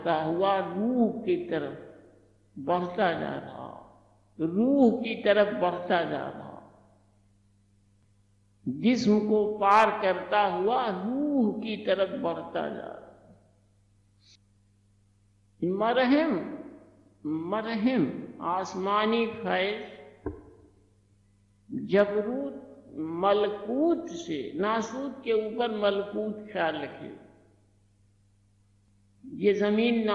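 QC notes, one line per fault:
No faults to note.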